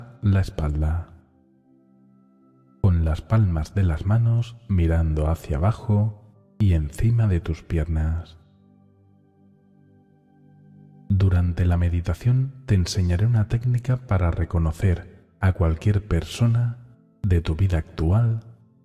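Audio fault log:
No faults heard anywhere in this clip.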